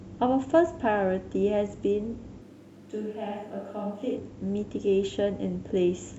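At 2.43 s the speech abruptly turns roomy and hollow, losing its low end and dropping about 5 dB, while background noise rises to roughly 30 dB below the speech. This is a switch to a distant microphone, likely because the close microphone's feed dropped out and a farther one took over. It ends just as suddenly at 4.15 s. A talker turning or stepping away would shift the tone gradually, not flip at two clean edges.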